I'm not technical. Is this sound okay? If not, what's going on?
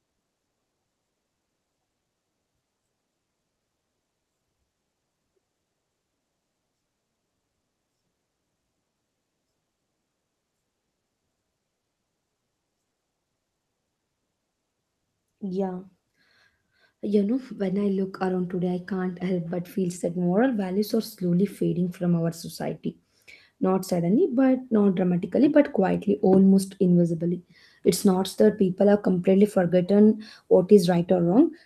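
Yes, nothing wrong can be heard anywhere in this recording.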